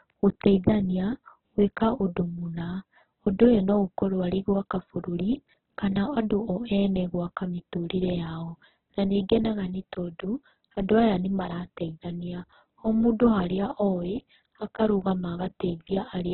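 From start to finish the speech sounds rough, grainy and noisy at its core, with nothing audible above about 4.2 kHz, giving a narrow, boxed-in tone. The likely cause is heavy Opus compression in its music-oriented CELT mode, starved of bits, which fits a rate near 8 kbps. It keeps each band's energy but fills detail with folded or noise-like content, and it has cut the bandwidth to narrowband.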